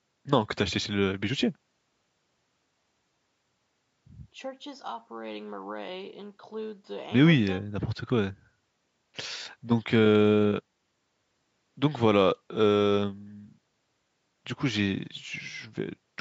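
No technical faults can be heard in the speech, which shows only the expected traces of call microphone processing, with nothing above 8 kHz.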